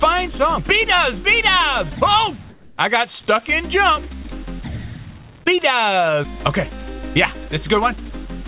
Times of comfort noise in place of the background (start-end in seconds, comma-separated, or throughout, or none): 2.50-2.78